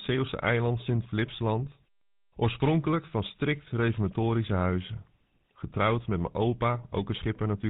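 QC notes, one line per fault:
Throughout: GSM full-rate codec. The speech has gone through the original GSM full-rate coder, and the damage points to its 13 kbps mode. The coder models the vocal tract as a filter and drives it with a sparse train of regularly spaced pulses. Two thirds of the excitation detail is discarded, and nothing above 4 kHz survives. The result is plainly audible: a dull, band-limited voice with a buzzy, gravelly roughness.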